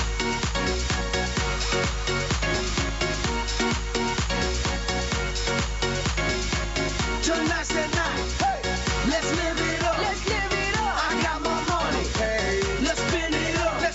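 Gain pumping throughout: the gain swings around 10 dB, likely a fast limiter on overdriven gain, smoother than gating's abrupt cuts.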